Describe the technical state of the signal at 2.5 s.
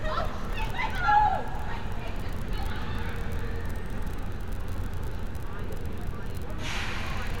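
Nothing is wrong with the signal at 2.5 s; the audio there is intact.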